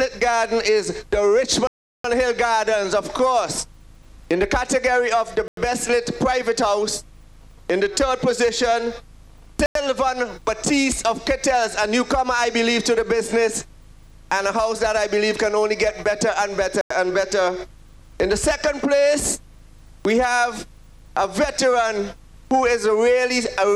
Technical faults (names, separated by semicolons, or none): block of digital silence